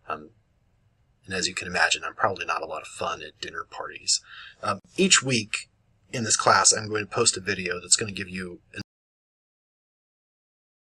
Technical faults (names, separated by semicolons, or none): gap at a join of encoded pieces; audio dropout to silence